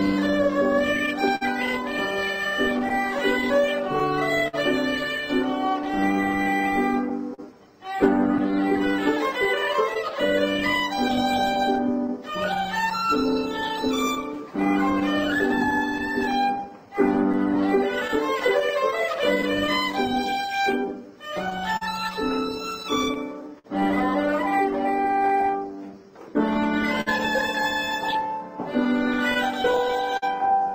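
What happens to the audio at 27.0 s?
From 27.01 to 27.08 s there is a short stall from a late packet. A packet missed its playout time, the jitter buffer ran empty, and the receiver held the last sound for 55 ms until the data arrived. It then resumed from the same point, so nothing is lost, but the delay grows by 55 ms. The held sound is audible as a brief smear, with a slight buzz or dip.

This stall sits within a longer run of repeated timing corrections from 0.20 to 29.75 s. The receiver keeps inserting repeated fragments to stay in step, playing the material at 99% speed and adding roughly 0.4 s over the span. Each insertion is small and unevenly spaced, all in the same direction.

Both faults come from clock drift between sender and receiver, which runs through the whole clip. The sender's clock runs roughly 4% slow relative to the receiver, so the jitter buffer steadily drains. The receiver compensates with the repeated fragments, and when the margin runs out entirely, as it does at 27.01 s, the buffer empties and the playback stalls briefly.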